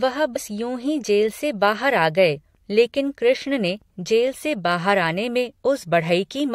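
At 0.35 to 0.37 s, just before "यूं ही", damaged data in the compressed stream makes the decoder misread a frame and resynchronise, giving a brief glitch. A spectrogram shows a short broadband smear; the waveform shows an abrupt discontinuity.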